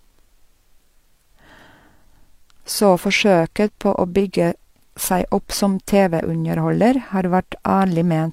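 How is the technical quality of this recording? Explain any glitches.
Nothing in this recording catches the ear as a glitch, so there's really nothing technical to explain here.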